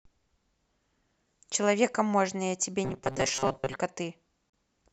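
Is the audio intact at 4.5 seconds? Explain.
No. From 4.50 to 4.53 s the speech drops out completely for 38 ms, then resumes where it stopped. This is a Bluetooth stall. Radio interference likely delayed packets, so the headphones' buffer emptied and playback paused until the resent data arrived.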